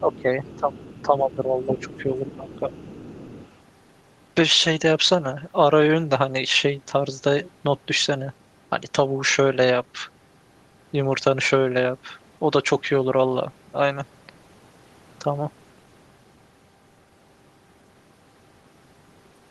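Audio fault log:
0.0 to 3.57 s, other side's voice leaking through: the echo canceller likely left part of the far end's loudspeaker signal in the microphone feed. A second voice sits behind the talker at 0.0–0.22, 0.44–0.6, 0.82–1.06, 1.64–2.03 and 2.26–3.57 s, about 20 to 25 dB below the speech.
0.0 to 0.84 s and 1.02 to 2.67 s, speech suppressed in double talk: with both sides talking at once, the canceller likely could not tell the talker from the echo and turned everything down. The talker's level sinks by up to about 15 dB in the first stretch and about 10 dB in the second, over roughly half a second and then roughly one and a half seconds.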